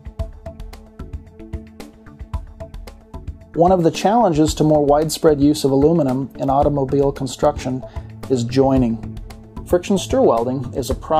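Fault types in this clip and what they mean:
No dropouts, distortion, level jumps, timing problems or other technical faults can be heard anywhere in the audio.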